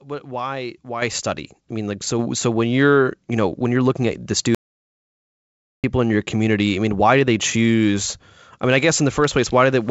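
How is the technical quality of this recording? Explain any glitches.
The recording has three glitches: two upward level jumps and one full dropout. It also shows the band limit of a call path, with nothing above 8 kHz, which fits G.722 at 64 kbps.

At 1.02 s and again at 2.19 s, the microphone volume steps up. The call software judged the input too quiet and raised the device gain in one go. The voice and background both jump, by about 8 dB after "what why" and about 4 dB after "study I mean like".

From 4.55 s to 5.84 s there is an audio dropout to silence lasting 1.29 s. It begins after "you're looking at the" and ends before "in your community I". The gap is total silence with no room tone, likely from a lost input while zeros kept being written. Whatever was said in that gap is gone.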